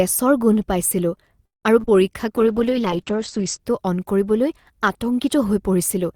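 Speech clip with three kinds of call fault. A call audio freeze at 1.45–1.65 s, right after "গোন্ধ পাইছিলো", was likely caused by packets held up in transit so the jitter buffer ran dry. The receiver stretched the last sound briefly into about 150 ms of silence, then resumed where it stopped, adding roughly 0.18 s of delay without losing audio. Short concealed packet loss follows: 40 ms of audio missed the decoder at 1.80–1.86 s, and another 20 ms at 1.86–1.89 s. The receiver extrapolated from the preceding sound and blended back, which comes across as a quick smear or wobble. A call bitrate drop then runs from 2.37 to 3.66 s, ending just before "অন কৰিবলৈ". The bandwidth estimate collapsed, forcing the Opus encoder from 40 kbps down to 9 kbps for about 1.2 s and narrowing its band from 20 kHz to 8 kHz, so the speech turns coarse and muffled until the rate recovers.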